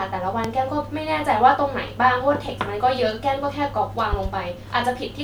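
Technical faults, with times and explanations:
0.44–0.47 s and 4.13–4.28 s, loud pop: a single sharp pop rising roughly 15 dB above the speech, then a quick pair about 10 dB up, with the speech continuing beneath. A voltage pulse from a plug, switch or static discharge is likely.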